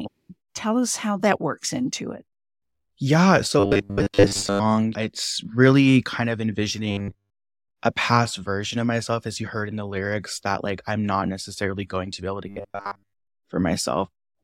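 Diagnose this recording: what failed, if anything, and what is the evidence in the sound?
Robotic sound from repeated short buffers, likely a driver or buffer underrun: a rigid 100 Hz buzz at 3.6–4.61 s, 6.91–7.3 s after "it's really kind of", and 12.48–13.27 s after "to be able to". Looping 10 ms chunks replace most of the speech, all of it at the end.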